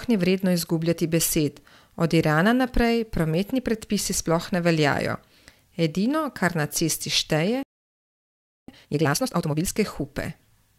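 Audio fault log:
7.63–8.68 s, playback stall: the speech halts in mid-flow and the output goes fully silent for about 1.05 s before sound resumes. The likely cause is the player running dry of buffered data or its audio thread being held up. Unlike a brief dropout, which skips a few milliseconds and carries on, this is a clean, sustained hole long enough to register as a pause the talker never made.
8.68–9.72 s, time-compressed catch-up: once output returns, the speech runs at twice its normal rate for about a second while the player works off the backlog that built up during the stall. It cuts out small slices and cross-fades the joins, so pitch stays at its normal level and only the pace is hurried. A plain speed-up would instead raise the pitch, giving a chipmunk quality that is absent here.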